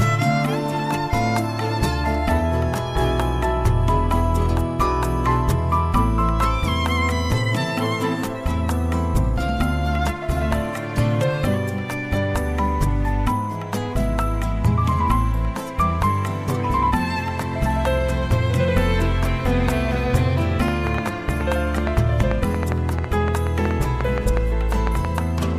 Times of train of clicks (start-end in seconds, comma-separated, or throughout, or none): 20.68-25.06